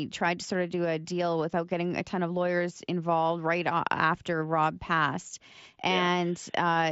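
No technical faults can be heard in this speech, which comes through a Bluetooth mSBC headset link working normally.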